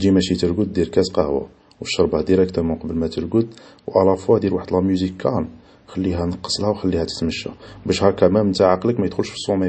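A speech recording with a hard ceiling on its bandwidth for its whole length. Nothing is present above 8.4 kHz, so the sound is dull and lacks air and sibilant detail. The smeared, swirly coding artefacts sound like a very low-bitrate MP3, around 32 kbit/s. The file behaves like a high-bitrate one, near 256 kbit/s. This is likely low-bitrate audio saved at a high bitrate. The second encoding kept the damage and could not restore the missing top end.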